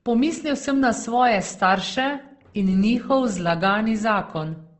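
Opus compression runs throughout the clip: the speech sounds grainy and rough, plainly damaged, with nothing above 8.1 kHz. This likely comes from Opus's CELT mode running short of bits and filling starved bands with folded or noisy energy, which fits a bitrate near 16 kbps.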